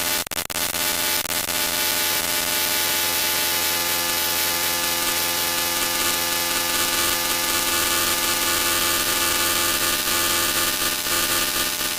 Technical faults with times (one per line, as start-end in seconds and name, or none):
3.19-3.21 skip ahead